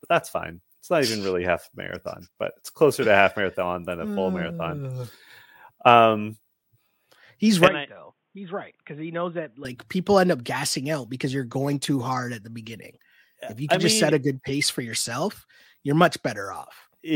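From 7.68 to 9.65 s the input likely switched to a poorer device, which cuts everything above 3.8 kHz and drops the level by about 10 dB. The speech turns dull and quieter with no gap, over a faint new noise floor, from "people end up gassing" on, then clears.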